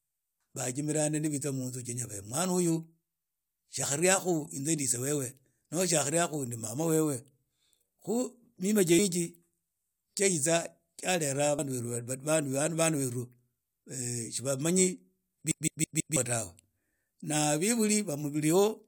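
At 3.82, 8.98 and 11.58 s, damaged data in a compressed stream makes the decoder lose sync, giving brief glitches, not a repeating stutter. From 15.52 to 16.17 s, a CD stuck on one turn replays the same 163 ms of speech four times with short mutes, an even loop unlike the single isolated blips.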